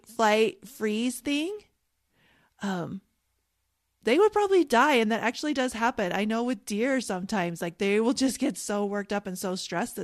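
No technical faults are audible.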